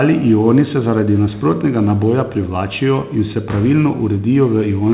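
Nothing stood out on listening to this speech, which comes through a G.711 mu-law call path at 64 kbps with nothing above 4 kHz.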